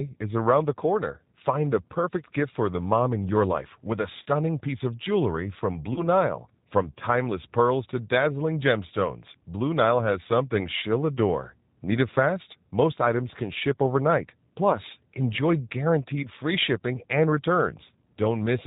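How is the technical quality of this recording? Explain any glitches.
The recording carries plainly audible low-bitrate codec damage throughout, plus two brief concealed packet losses.

G.729 codec, entire clip: the speech passes through an 8 kbit/s G.729A coder that resynthesises it from a vocal tract filter, pitch predictor and sparse pulses, with nothing above 4 kHz. The result sounds rough and slightly synthetic. That synthetic texture, not just dullness, separates it from a simple low-pass filter.

VoIP packet loss concealed by the speech codec, at 4.23 to 4.28 s and 5.93 to 6.04 s: each time, about 30 ms of audio went missing, which fits one lost packet. The decoder extended its last pitch and filter at falling gain, producing a short, fading smear. The sound stays weak for a moment afterwards. Unlike a dropout, there is no silent gap or hard click.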